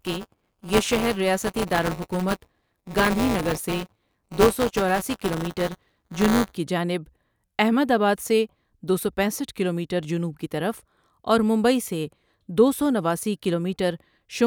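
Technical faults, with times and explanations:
0.00–6.57 s buffer tearing: the writer and hardware reader cross inside each period, splicing in roughly 10 ms-old audio, causing a 188 Hz buzz that fits a 256-sample buffer.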